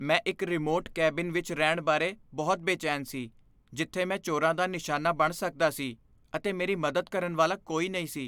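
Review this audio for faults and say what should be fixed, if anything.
No technical fault can be heard anywhere in the speech signal, so there is nothing here to fix.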